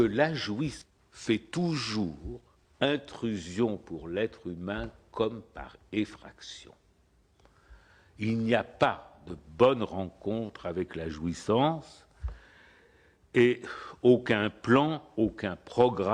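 At 0.81 to 0.83 s there is a skip ahead. About a second of audio is simply gone. Playback jumps forward, and nothing fills the join. The two sides meet almost directly, so the sound lurches abruptly. A stretch of audio was dropped while later audio was already waiting. Playback then closes that gap at once, cutting the delay by roughly a second.

From 0.90 to 3.24 s comes a jitter buffer speed-up. The audio runs at 111% speed with its pitch unchanged. It sounds hurried. The buffer was holding more audio than it aims for. To bring the delay down, the receiver cut many short pitch-period pieces in a row. Together they remove about 0.3 s.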